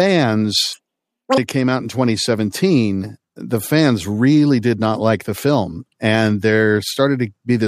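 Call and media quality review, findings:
Audio read two samples at a time (double speed), 0.73–1.38 s. Speech runs 2x fast, an octave (12 semitones) high. Probable component is the reader or decoder taking sample pairs as one frame, likely from a mono/stereo or sample-width mismatch.

Spectrogram: harmonics and formants jump to double frequency across that span. Waveform: the segment is squeezed to half its duration, with pitch periods visibly halved.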